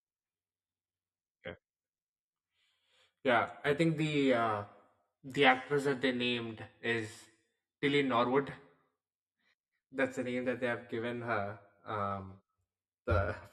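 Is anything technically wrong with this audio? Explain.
Yes. Channel delay causes comb filtering through the whole speech clip. One channel lags the other by around 10 ms, and the two are summed to mono. Shared content cancels at evenly spaced notches from around 40 Hz upward. The speech sounds hollow and phasey.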